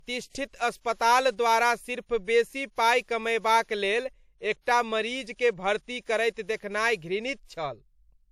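Throughout, the speech stops dead above 16.1 kHz and keeps earlier compression artefacts: likely low-bitrate audio saved at a high bitrate, which fits a 64 kbit/s WMA source.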